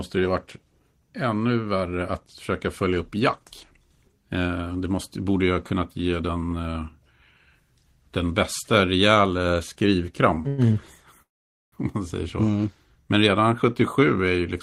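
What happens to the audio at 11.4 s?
A call audio freeze from 11.22 to 11.74 s: the speech halts into near-silence, likely from delayed packets, then resumes where it stopped, so nothing is lost, unlike a dropout.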